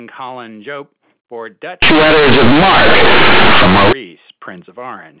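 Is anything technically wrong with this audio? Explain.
Yes. From 1.82 to 3.93 s the speech shows companded audio read as linear: mu-law bytes play as raw 8-bit samples without expansion, producing loud, buzzy distortion and heavy noise in pauses.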